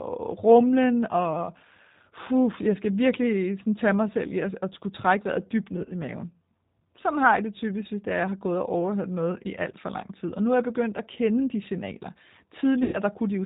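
G.729 codec damage runs through the whole recording. The sound is rebuilt from a vocal tract filter, a pitch predictor and a few pulses per frame, which fits an 8 kbit/s G.729A stream. Nothing above 4 kHz survives, and the speech sounds plainly rough and synthetic.

VoIP packet loss concealed by the speech codec occurs at 5.77 to 5.94 s and again at 12.83 to 12.99 s. The first loss points to about 50 ms of missing audio scattered in short gaps, none longer than 10 ms. The second loses about 100 ms of audio. Each time, the decoder stretches its last pitch and filter into a fading, buzzy, coloured sound, and the speech stays weakened briefly afterwards.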